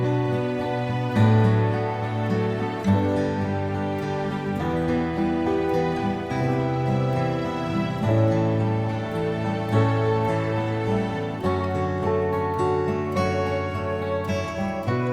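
No technical faults can be heard anywhere in the audio.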